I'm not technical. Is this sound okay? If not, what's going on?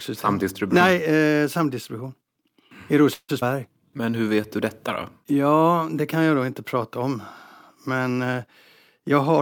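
No, there are a few glitches in this speech, all bunched near the start and the very end.

Around 3.13 to 3.31 s there's a call audio freeze: the sound hangs as a fading buzz, then goes quiet, most likely from late-arriving data.

Right after, at 3.41 s, a skip ahead jumps past roughly a fifteenth of a second of speech, so a little sound is simply lost.

From 3.80 to 4.42 s, just before "du detta", a jitter buffer slow-down stretches things to about 88% speed, drawn out but same pitch.

At 9.05 to 9.41 s a jitter buffer speed-up trims a few short bits, so the ending sounds slightly rushed, about 11% faster.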